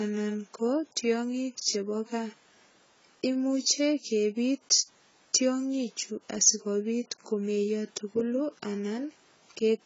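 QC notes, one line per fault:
Throughout, AAC compression: the speech has nothing above 7.6 kHz and the sound is dull and smeared, with a warbling, fizzy texture on sustained sounds and sibilants. The likely cause is an AAC-LC encoder starved of bits, and the heavy damage fits a bitrate of around 16 kbps. With so few bits per frame, the encoder drops the top band entirely and coarsely quantises what remains, leaving spectral holes that flicker from frame to frame.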